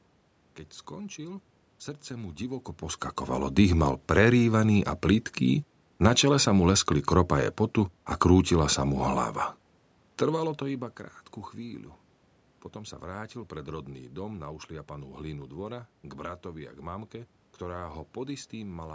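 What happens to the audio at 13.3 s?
At 13.3 s the speech passes through intact, with no dropout, click, distortion or other technical fault at that point.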